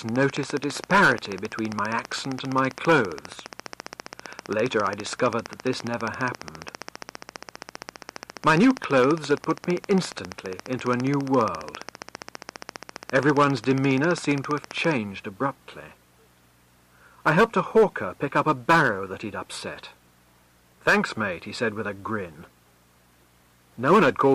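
From 0.09 s to 14.92 s a regular train of clicks ticks over the sound at about 15 per second, around 200 in all, peaking roughly 10 dB above the signal, likely from interfering equipment. The waveform shows evenly spaced sharp spikes, and the spectrogram shows matching thin vertical lines.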